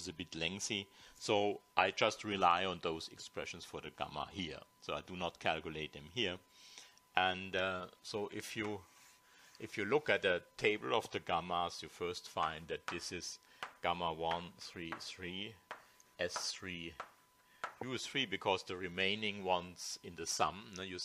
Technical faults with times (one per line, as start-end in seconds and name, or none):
0.00-21.05 USB whine